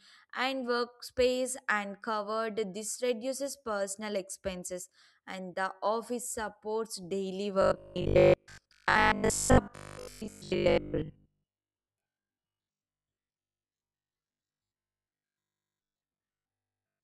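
Speech that, from 7.62 s to the end, turns into a rigid, metallic buzz fixed at 50 Hz while still loosely tracking the words: robotic sound from repeated short buffers. Likely cause: audio arriving too seldom, so most of it is replaced by repeats of the last chunk, which fits a 20 ms buffer.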